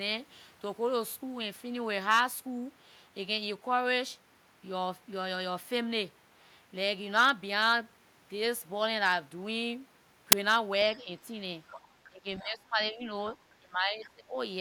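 At 10.32 s an uninitialised buffer throws out a loud crack, which fits a 10 ms block of leftover memory. At 10.95, 11.7 and 12.4 s a faint second voice breaks through in scraps, likely the other side's voice leaking through because the echo canceller missed the loudspeaker signal. It is distinct from reverb because it is a separate voice. Speech is suppressed in double talk at 11.03 s and again from 12.09 to 13.03 s and 13.36 to 14.35 s, dipping by up to about 20 dB, likely because the canceller ducked its own talker along with the loudspeaker echo. These dips follow the overlapping talk, not a network gap.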